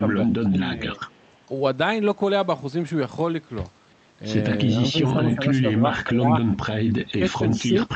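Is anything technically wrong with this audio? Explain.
Yes, there are two kinds of trouble here, both typical of a speakerphone call.

Speech suppressed in double talk shows up three times: from the start to 1.0 s, from 4.92 to 6.38 s, and from 7.14 s to the end. In each stretch the voice sinks, by about 10 dB in the first and about 15 dB at the deepest in the later two, and parts of it fade in and out. This is likely the echo canceller losing track when both ends were talking at once, so it turned down the near talker along with what it took to be loudspeaker echo.

There's also a brief echo leak between 1.08 and 1.25 s: a very faint delayed copy of the voice, trailing by about 350 ms and sitting roughly 35 dB under the speech, so you have to listen for it. It's likely the far end's loudspeaker sound reaching its microphone and slipping past that side's echo canceller, which then sent a scrap of the voice back down the line.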